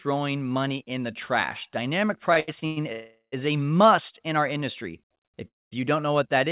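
From 2.34 to 2.78 s the audio shows repeated stalls (stutter). The jitter buffer ran dry four times, with the longest gap about 102 ms, and each gap was filled by continuing the last sound. About half of that span is filler, so the audio hiccups in short bursts rather than breaking once.

At 2.92 to 3.34 s comes a call audio freeze. The last sound is held for 400 ms, and its final 90 ms is silent, before the audio resumes where it stopped. The likely cause is packets held up in transit. Unlike the stutter, it is a single long hold.

From 4.53 to 5.36 s a jitter buffer slow-down stretches the audio to 90% speed, adding 95 ms by repeating pitch periods. The pitch stays the same while sounds are drawn out, and nothing stops or goes silent.

A second call audio freeze at 5.48 to 5.73 s fills 235 ms, of which 210 ms is silence, so it sounds mostly like a clean dropout. Throughout the clip, nothing is present above 4 kHz, which fits a narrowband G.711-type call codec.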